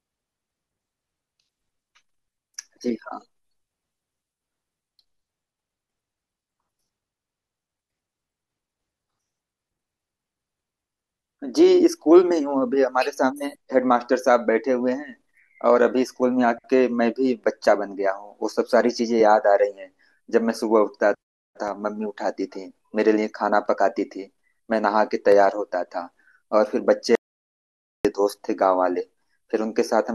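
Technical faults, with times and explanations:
27.15 to 28.05 s, audio dropout to silence: the input feeding the recorder was likely lost for a moment, through a disconnected device, a failed link or a stray mute, while the recording carried on writing silence. The speech cuts off abruptly and returns just as abruptly after about 0.9 s. The gap holds silence with no room tone, so whatever was said in that stretch is gone.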